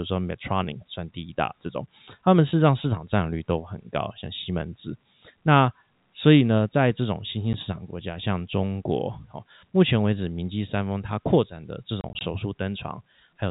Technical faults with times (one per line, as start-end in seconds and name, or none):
7.53 packet loss filled with silence
12.01-12.21 packet loss filled with silence